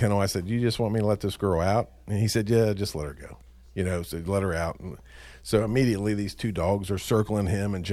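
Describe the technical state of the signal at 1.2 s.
At 1.2 s the speech signal is intact, with no audible technical fault at that moment.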